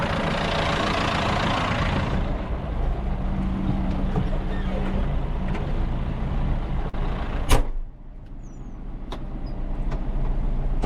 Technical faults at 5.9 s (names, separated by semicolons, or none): none